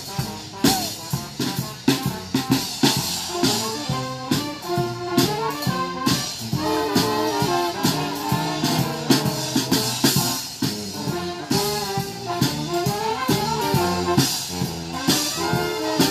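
No technical faults can be heard anywhere in the audio.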